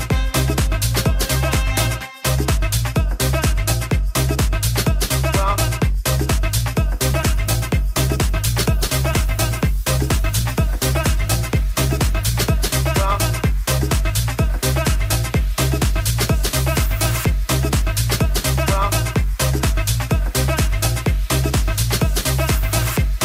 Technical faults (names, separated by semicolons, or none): call bitrate drop